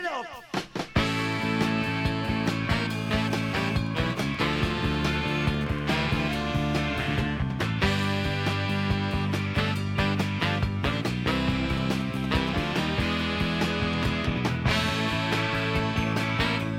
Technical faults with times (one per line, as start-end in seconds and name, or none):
2.90-3.76 GSM phone buzz
3.87-5.79 GSM signalling bursts
11.77-12.49 GSM signalling bursts